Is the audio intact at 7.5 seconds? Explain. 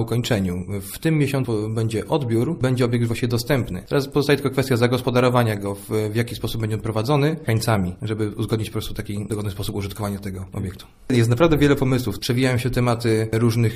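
No. At about 7.47 s the sound jumps abruptly ahead with a small blip, and a stretch of the programme is simply missing. This is likely a stream segment skipped: one segment of the stream failed to load, and playback continued from the next.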